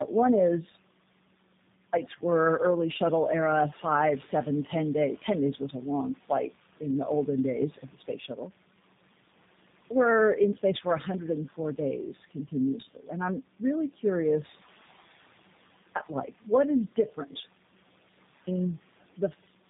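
Throughout the recording, the call passed through two low-rate speech codecs in a row, ending in what sounds like G.729A with an AMR-NB stage before it, so each coder re-encoded the previous one's already damaged output. That tandem speech coding leaves the speech rough, muffled and warbly, with nothing above 3.8 kHz, so the sound is thin and lacks crispness.

At 1.46 s, after a 0.68 s pause, the output device had gone idle and needed time to wake. That clipped start after a pause swallows about 0.47 s, up to 1.93 s. The speech then begins abruptly out of silence with "were early shuttle era", its opening sounds missing. The same happens at 15.52 s after a 0.93 s pause, losing about 0.43 s until 15.95 s. The faint room noise, about 21 dB below the speech, is ordinary background in the recording.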